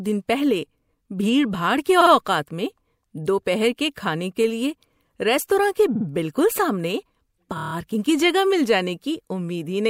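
Repeated frames make the speech stutter at 2.00 and 5.95 s, where a 52 ms chunk replays twice. At 7.57 s a 26 ms slice loops six extra times, a brief stutter that adds about 0.16 s.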